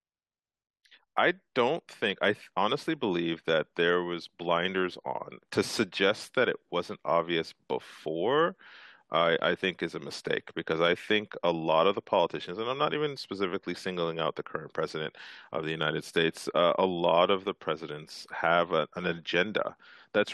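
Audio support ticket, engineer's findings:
Compressed frames skipped in the speech at 10.11 s and again at 13.13 to 13.17 s. Audio jumps ahead, with about 50 ms and 20 ms of audio jumped. Decoder dropping missing or damaged frames.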